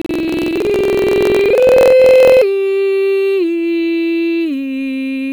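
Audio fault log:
0.00–2.45 s, buffer tearing: the music carries a steady rattling buzz at about 21.5 Hz, which fits a 2048-sample buffer. The writing side and the playback side of the ring buffer have slipped and cross inside every period, so most of each buffer replays music from roughly a tenth of a second earlier. Hard joins on both sides of that stale stretch repeat at the buffer rate and produce the buzz.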